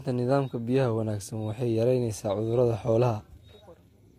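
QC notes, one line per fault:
Throughout, transcoding between lossy codecs: the speech carries two overlapping layers of coding damage, with nothing above 16.7 kHz. This mix points to an HE-AAC encode at around 48 kbit/s, likely re-encoded to Vorbis at a similar rate. The second codec spent its bits reproducing the first one's artefacts, so both remain audible together.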